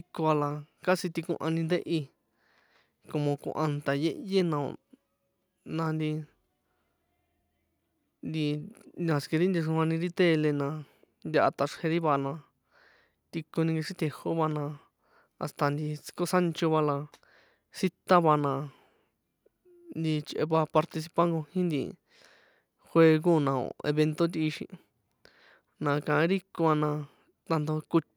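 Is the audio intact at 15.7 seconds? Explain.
Yes, the audio is intact at 15.7 seconds, with no dropout, glitch or other fault at that moment.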